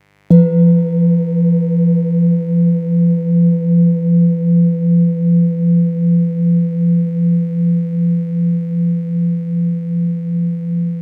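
From the first second to the last there's mains buzz sitting under the audio, about 40 dB down from the programme. Something like a dimmer, a rectifier or a missing shield is letting sharp switching spikes into the signal twice every 50 Hz cycle, so you get a stack of 50 Hz harmonics running up to several kHz. It comes across as a steady, raspy buzz rather than a smooth low hum.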